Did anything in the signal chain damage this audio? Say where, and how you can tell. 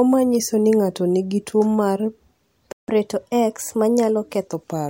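Yes. The damage is at the playback stage. A playback stall cuts the speech off mid-flow at 2.72 s, and the output stays silent for about 160 ms until 2.88 s, when the sound resumes. On the waveform this is a flat silent gap with abrupt edges. The spectrogram shows a clean vertical blank band across all frequencies. The likely cause is a player that ran dry of buffered data or had its audio thread blocked.

Right after the gap, from 2.88 s to 4.47 s, the player catches up at higher speed. It plays the backlog at 1.1 times normal rate by resampling, which raises the pitch by roughly one and a half semitones until it drops back to normal. On a spectrogram the harmonic lines sit visibly higher and the syllable spacing is compressed over that stretch, then both return to their earlier positions. The waveform looks time-squeezed.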